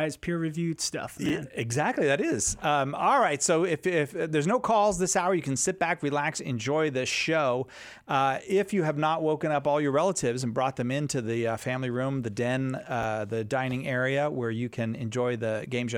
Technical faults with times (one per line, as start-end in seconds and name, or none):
1.26-1.30 chunks out of order
13.02 chunks out of order